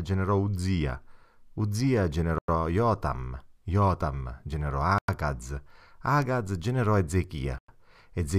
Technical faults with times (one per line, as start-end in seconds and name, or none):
2.38-2.48 gap between chunks
4.98-5.08 gap between chunks
7.58-7.68 gap between chunks